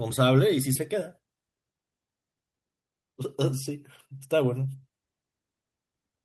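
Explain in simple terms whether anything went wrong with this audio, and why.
Two faults are audible in this speech clip. The first is a skip ahead at about 0.75 to 0.77 s. Roughly a second of speech is simply missing, and playback jumps straight from before the gap to after it with no silence in between. This happens when a chunk of audio is lost in transit, or discarded because the receiving buffer was overfull and newer audio was already queued. The two sides are butted together, so the jump sounds abrupt.

The second is a jitter buffer speed-up from about 0.93 to 4.90 s. After the jump, the receiver was still holding more audio than it wanted, which adds delay. To catch up, it repeatedly snipped out tiny slices, each just one or a few cycles of the voice's vibration, about half a second in total. The speech plays at roughly 113 percent of normal speed without any change in pitch, so it sounds rushed rather than higher.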